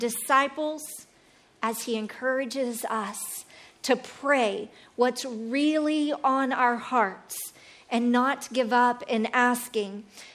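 No technical faults can be heard in the audio.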